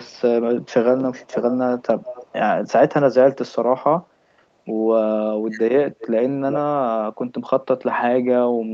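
Echo leak appears in the speech at 0.63–0.67 s, 1.19–1.55 s, 2.02–2.40 s and 5.99–6.07 s as a delayed copy of the voice trailing behind by 344 to 426 ms. It is barely audible in the first scrap and about 10 to 15 dB below the speech later. The likely cause is a far-end loudspeaker whose echo canceller let part of the playback back into its microphone. Speech suppressed in double talk occurs at 5.39–5.73 s, where the voice drops by roughly 40 dB for about 0.3 s while the other side talks. The likely cause is the echo canceller mistaking the talker for echo and turning both down together.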